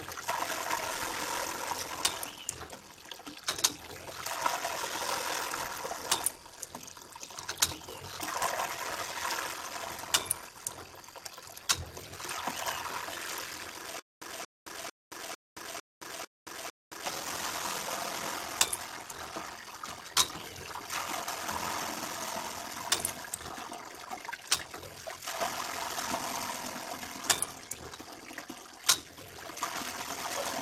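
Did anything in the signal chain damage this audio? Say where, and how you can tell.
Yes. The codec stage has degraded the whole clip. Upper sub-bands drop out and flicker back while the remaining bands sound coarse, giving a dull top end with a gurgling, granular texture. That pattern is typical of MPEG Layer II, so this is likely MP2 compression at a starved bitrate, around 80 kbps. With so few bits, the encoder switches off whole high bands and quantises the rest crudely.

A buffer stage has a block size mismatch with zero padding, running throughout. A steady buzz at 43.1 Hz sits under the audio, and everything plays slow at 0.861 times normal speed, though the timbre stays. The writing stage delivers blocks about 14% short of what the reading stage expects, which fits a 1024-sample read. Each block is topped up with silence, and those gaps repeat at the block rate.

Between 14.00 and 17.06 s, the playback or stream stage stalls, likely a buffer underrun on retry. 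The same burst of about 0.2 s plays 7 times, each followed by about 189 ms of digital silence, so the cycle repeats every 388 ms. Each retry replays the last fragment and then runs dry. The audio that belonged in that span never arrives and is lost.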